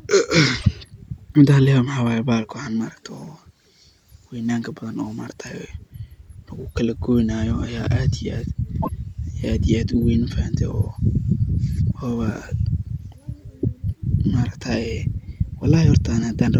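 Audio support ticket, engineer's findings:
Damaged data in a compressed stream, 0.56–0.66 s and 8.79–8.89 s: short disruption of about 0.09 s in the speech each time. Probable component: decoder input, with bad or missing bytes in the stream. Decoder misreads the corrupt frames, loses sync, recovers at the next frame header. Distinct from clipping because the disruption is not tied to loud peaks.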